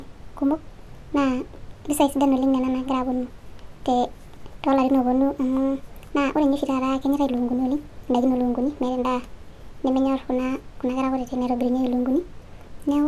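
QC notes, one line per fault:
Throughout: wrong sample rate. The speech runs about 1.45 times too fast and sits about 6.45 semitones high, hurried and chipmunk-like. Speed and pitch shift together by one ratio, which fits audio recorded around 22 kHz being played back at 32 kHz without conversion.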